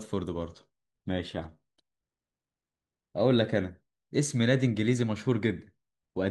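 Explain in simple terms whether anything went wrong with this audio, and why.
Listening to this speech recording, nothing went wrong that a listener would notice.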